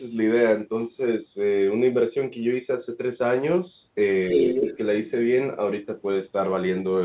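From 4.22 to 4.77 s a second voice sits under the speech at roughly the same loudness. This is the other side's voice leaking through, most likely loudspeaker echo that the echo canceller did not fully remove from the microphone. On a spectrogram two sets of harmonic stripes overlap at different pitches, all cut off at 4 kHz by the narrowband call path. The waveform shows no gap, just denser, busier energy.

Starting at 4.33 s and running to 4.78 s, the main speech is suppressed in double talk. With both sides active, the echo canceller likely could not tell its own talker from the echo and turned everything down. The voice dips by up to about 10 dB in patches that add up to roughly 300 ms, so it sounds pumped. The waveform envelope shows ragged notches, and the spectrogram shows faded vertical bands.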